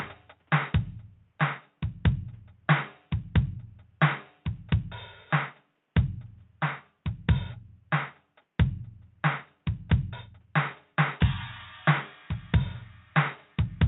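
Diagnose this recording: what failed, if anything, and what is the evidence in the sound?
Nothing stood out on listening to this music; it carries the band-limited sound expected of a call path, with little above 8 kHz.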